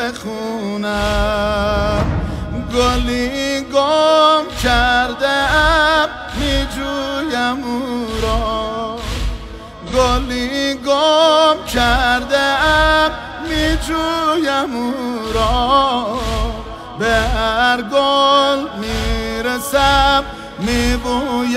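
A short AAC frame loss with concealment occurs at 9.86 to 9.93 s. The audio turns briefly smeared and noisy for about 43 ms, which fits one lost frame. The decoder rebuilt the gap from the previous good spectrum with scrambled signs or interpolated energy.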